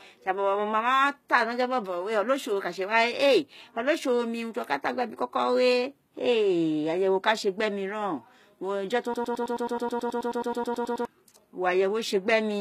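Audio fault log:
throughout, HE-AAC compression: The encoder likely kept only the lower part of the spectrum and rebuilt the treble by spectral band replication, copying lower bands upward under a coarse envelope. The damage is plainly audible, which fits a bitrate of around 20 kbps. The top end reaches high, but its harmonics no longer line up with the real ones below the crossover, so sibilants come out gritty, metallic or lispy throughout the speech.
9.14 to 11.05 s, broken-record loop: The stream or player likely stalled and kept resending the last fragment it held, a slice of 107.1 ms. That slice repeats exactly, back to back, 18 times, so for almost two seconds the speech becomes a rapid, machine-like stutter at roughly nine repeats per second. Whatever should have been heard in that stretch is gone, and normal playback resumes at 11.05 s.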